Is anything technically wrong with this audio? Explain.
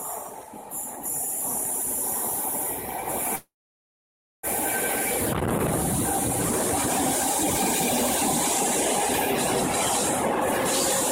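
Yes. From 3.35 to 4.45 s there is a call audio freeze: the last sound trails off into about 0.94 s of silence, then the audio resumes where it stopped. The likely cause is delayed packets draining the jitter buffer, inserting roughly 1.08 s without losing content.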